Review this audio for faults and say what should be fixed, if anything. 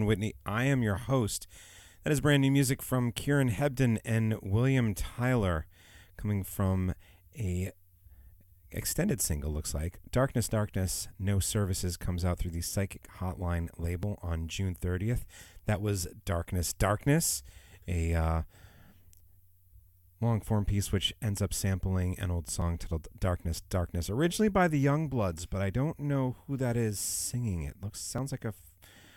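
The speech skips forward at four points: 4.45 s, 14.03 s (between "through the psychic hotline" and "on june"), 22.62 s (just after "up sampling an old") and 28.18 s. Each is a sudden jump with no silence in between, losing roughly 10, 5, 20 and 10 ms respectively. This is likely a dropped buffer (overrun). The recording software did not read its incoming samples in time, the hardware wrote over them, and the audio on either side was joined directly. Preventing it means giving the capture path more headroom, with a larger input buffer or higher priority for the recording thread.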